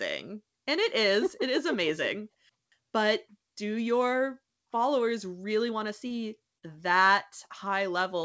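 Speech over a call path showing short concealed packet loss: around 6.08 to 6.12 s and again 6.58 to 6.64 s, roughly 20 ms and 40 ms of audio arrived too late, and the receiver extended the preceding sound to cover each gap. Each patch is a brief smeared wobble, under a band limit at 8 kHz that fits G.722.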